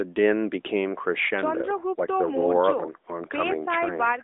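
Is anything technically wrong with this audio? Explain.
No, nothing's wrong here; it's simply speech coming through an AMR narrowband mobile link at what sounds like the 12.2 kbps rate, so it has that familiar phone-call band with nothing above about 3.8 kHz.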